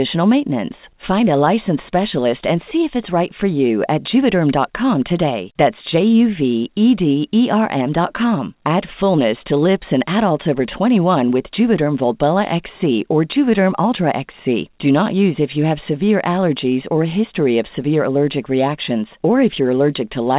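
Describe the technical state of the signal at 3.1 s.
At 3.1 s the sender's clock drift is present. The sender runs roughly 4% fast, so the receiver keeps trimming short pieces to hold its jitter buffer steady. Unlike packet loss, this leaves no gaps or dropouts, only a faintly rushed, uneven tempo.

These repeated timing corrections run from 0.16 s to 20.21 s. They are small cuts, all in the same direction and unevenly spaced, heard, if at all, as slight hiccups over speech already limited to 4 kHz by the G.711 call path.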